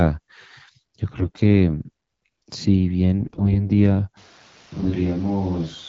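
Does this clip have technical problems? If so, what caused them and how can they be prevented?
Yes. AMR bit errors at 1.13–1.41 s, 3.20–3.69 s and 4.82–4.94 s make the speech hoarse and gargly. Flipped bits misplace excitation pulses and corrupt gain and spectral values, showing as smeared, noisy harmonics on a spectrogram. A stronger radio link or better error protection prevents this.

From 4.17 s to the end, the sound becomes roomy and hollow, about 5 dB quieter, with room noise about 25 dB below the speech. This is likely a switch to a distant microphone. The waveform steps down, and the spectrogram shows thinner bass and a raised noise floor. Monitoring the close microphone and keeping a backup feed prevents this.

The underlying AMR wideband (HD Voice) coding sounds clear, consistent with around 12.65 kbit/s.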